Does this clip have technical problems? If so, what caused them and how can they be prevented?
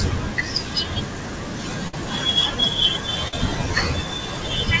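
Yes. A burst of packet loss struck at 1.88 to 1.94 s. A run of packets arrived too late or not at all, so the receiver stretched the last sound for 50 ms and faded it out into a held buzz or hiss. The speech then resumes with 50 ms gone. A larger jitter buffer or forward error correction would help prevent this.

A short concealed packet loss occurred at 3.28 to 3.33 s. About 40 ms of audio missed the decoder, and the receiver patched the gap with 45 ms extrapolated from the preceding sound before blending back, leaving a brief smear or wobble. Redundant packets or a steadier network connection would help prevent this.

Both gaps sit inside audio that stops at 8 kHz, which fits the G.722 wideband codec on this call path.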